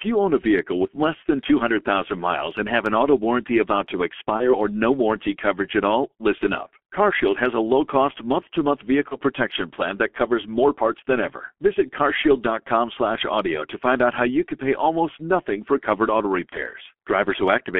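Throughout, the G.723.1 codec squeezes the speech into roughly a 6.3 kbit/s stream within a 250 Hz to 3.4 kHz line band, leaving it heavily muffled and hoarse with smeared consonants. At 4.38 to 4.55 s, 6.38 to 6.43 s, 9.08 to 9.17 s and 16.49 to 16.59 s, VoIP packet loss concealed by the speech codec occurs: each gap fits one lost 30 ms frame, which the decoder bridged by extrapolating, so the speech is briefly stretched into a buzzy tone or coloured noise that fades before recovering.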